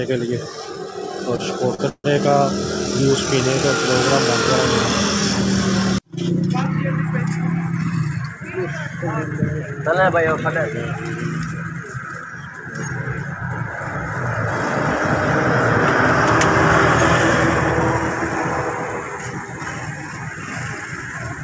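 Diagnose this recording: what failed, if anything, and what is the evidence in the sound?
Network and jitter buffer: short stalls from a late packet at 1.36 s and 1.74 s hold the sound 25 and 42 ms with slight buzz, then resume with nothing lost.

From 1.89 to 2.06 s the sound buzzes, fades, then falls silent for 50 ms before resuming exactly where it stopped. This is likely a call audio freeze, longer than a stall.

Jitter buffer speed-up from 7.44 to 8.25 s: the sound runs at 105% with pitch unchanged, as the receiver trims about 50 ms of pitch periods. Resampling would shift the pitch instead.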